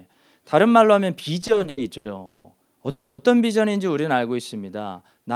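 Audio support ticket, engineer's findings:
Repeated stalls (stutter), 1.41–2.46 s: eleven late-packet gaps, up to 190 ms, about 41% of the span filled by repeated, fading last sound. Spectrogram shows smeared, stretched bands. Jitter buffer underruns.

Call audio freeze, 2.90–3.20 s: 280 ms buzz fading to brief silence. Waveform shows a flat-decaying block, then resumption with nothing lost. Likely packets held up in the network, emptying the jitter buffer.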